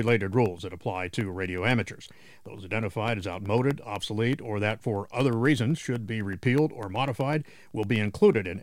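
From 0.08 s to 8.46 s the audio carries periodic USB or driver dropouts: every 0.125 s, eight times a second, a tiny slice of signal, around half a millisecond, is lost and replaced by silence. Something is stalling the USB bus or audio driver on a fixed schedule, so the stream briefly gaps at each stall. The result is a steady train of small ticks, some seventy in all, audible only where signal is present.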